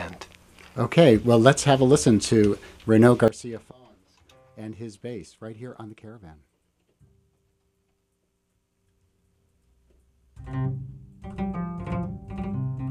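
At 3.28 s the level drops abruptly by about 17 dB and stays down to the end, a sudden gain jump. The likely cause is a digital gain setting applied without a ramp. Unlike a fade or compressor action, sound and background noise fall together in one step, with no gradual slope.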